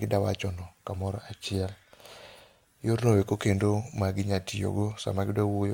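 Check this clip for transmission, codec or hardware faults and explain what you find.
Nothing faulty turns up anywhere in this speech recording.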